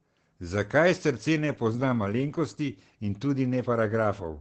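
Throughout, Opus voice compression leaves the speech muffled and hoarse, fitting SILK wideband coding near 12 kbps; a spectrogram shows nothing above 8.7 kHz.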